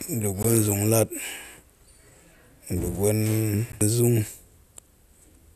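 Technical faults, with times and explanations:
0.43 s and 3.72 s, gap at a join of encoded pieces: the speech briefly drops to silence, about 17 ms at the first point and 13 ms at the second, then resumes exactly where it left off. Each join sits where two separately encoded pieces were butted together untrimmed, so encoder start-up delay and last-frame padding remain as dead air. Unlike a dropout, nothing is lost. The sound pauses rather than skipping ahead, and the edges are smeared by the codec rather than clicking.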